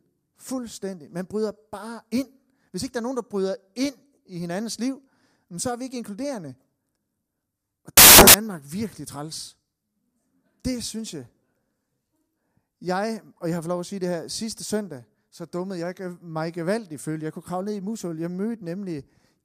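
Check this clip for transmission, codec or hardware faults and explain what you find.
One fault is present: a short burst of samples built from the wrong bytes. From 7.97 to 8.34 s, just before "virkelig træls", the speech gives way to loud, harsh broadband noise for about 0.37 s. The samples were reassembled incorrectly during that stretch, whether off by a byte, with the byte order swapped, or with a mismatched alignment. As a result, the rapidly changing low-order bits became the most significant part of each value, turning the signal into noise.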